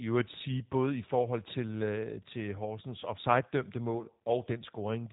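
Throughout, a G.729 codec rebuilds the speech from a filter-and-pulse model, leaving it plainly rough and synthetic, with nothing above 3.8 kHz.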